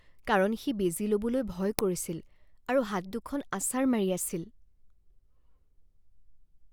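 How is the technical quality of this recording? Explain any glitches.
The speech recording has one clear glitch, an uninitialised buffer, at 1.79 s. For well under a millisecond, about 0.73 ms, the output plays memory that was never filled with audio, which fits a 32-sample block. The leftover values come out as a loud crack, heard as a sharp click. On a waveform it appears as a narrow spike that jumps to high amplitude, unrelated to the speech around it. On a spectrogram it shows as a thin vertical line spanning the whole frequency range.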